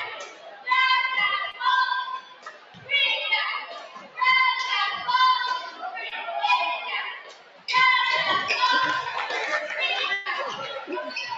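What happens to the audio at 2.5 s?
At 2.5 s the sound falls inside a stretch, from 2.19 to 2.9 s, where it is cut by the noise suppressor. The suppressor misreads the sustained, steady material there as background noise and pulls it down by up to about 14 dB for roughly 0.7 s, so the level sags and any decay is clipped short while sharper onsets survive. On a waveform the envelope visibly shrinks through that span; on a spectrogram the sustained bands fade and gap out.

This dip is one instance of a noise suppressor applied to music or sounds, a speech-tuned gain process that stays active across the whole clip. Because it keeps reclassifying held tones and ambience as noise, its gain swings by roughly 15 dB, giving a pumping, fluttering or thinned character around 2.5 s as well. A spectrogram shows blotchy, time-varying attenuation of the steady partials below the 8 kHz ceiling of the call path, with transients standing out as intact vertical strokes.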